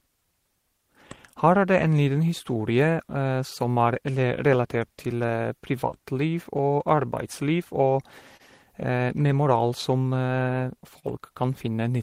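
Throughout the speech there is clock drift between sender and receiver: the sender's clock runs roughly 2% slow, so the receiver's jitter buffer keeps draining and must be topped up. The result is a faintly unsteady pacing across the whole clip, with small timing hiccups at uneven intervals.

From 0.25 s to 10.45 s, repeated timing corrections compensate for this. The receiver stretches playback to 98% speed by repeating short pieces, adding around 150 ms in total. Each edit is small and all go the same way, so the effect is a slightly dragging, uneven tempo rather than distinct glitches.

Scattered short gaps appear from 1.29 s to 6.61 s: about five late or lost packets, each patched by continuing the preceding sound, the longest only about 10 ms and roughly 40 ms in all. They come through as brief ticks or tiny smears.

A second run of scattered short gaps falls between 8.37 s and 11.06 s. 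There are about three concealed holes totalling roughly 70 ms. The longest is around 40 ms.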